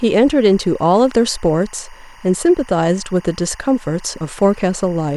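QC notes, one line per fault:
Throughout: timecode bleed. A faint chirping warble sits about 30 dB under the speech, flipping between tones near 1 and 2 kHz. Linear timecode is leaking in from an adjacent track or cable, and its pattern repeats at a 23.976 fps frame rate.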